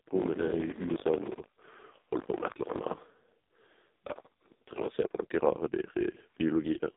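It's a speech clip that has come through the AMR narrowband mobile codec, and a heavily squeezed one at that: nothing gets past about 3.8 kHz, the line band runs roughly 200 Hz to 3.7 kHz, and the buzzy, synthetic edge fits the 5.15 kbps AMR-NB mode. From 0 to 4.88 s there's also buffer tearing, a steady 50 Hz rattle riding the signal. The writer and reader are crossing every 20 ms period, so around a tenth of each buffer replays audio from roughly 70 ms earlier, with hard joins either side.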